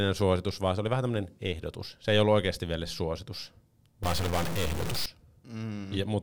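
A stuck bit runs from 4.03 to 5.06 s, just after "ollut oikeasti vielä suositus". The speech turns harshly buzzy, and quiet moments fill with a hiss-like noise at about -30 dBFS, as one sample bit is likely held fixed, offsetting about half the samples.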